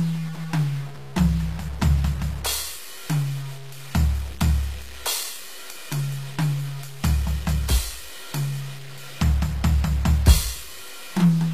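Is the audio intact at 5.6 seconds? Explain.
No. At 5.6 seconds the music carries the same low bit depth without dither that runs through the whole clip. The grit and sputter fit samples likely truncated to about 7 bits with no dither, so the rounding error tracks the music and sits only around 20 dB below it, turning quiet passages grainy.

On top of that there's plainly audible HE-AAC compression, also present throughout, with nothing above 14.9 kHz. The treble sounds like it's likely rebuilt by spectral band replication, copying lower bands upward, at a rate that points to around 24 kbps. So the top end isn't the original and comes across metallic and gritty.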